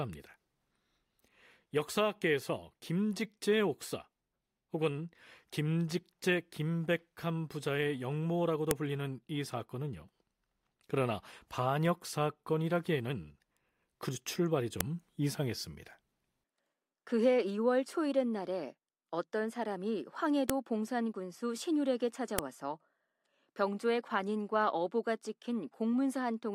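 Sharp, loud clicks at 8.71, 14.81, 20.50 and 22.39 s are file headers played as audio: header bytes left between joined speech segments play back as samples.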